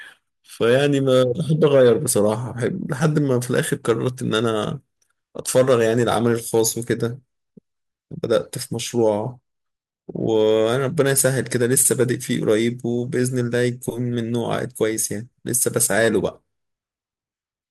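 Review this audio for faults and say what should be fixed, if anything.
No faults found in the speech recording, so nothing needs fixing.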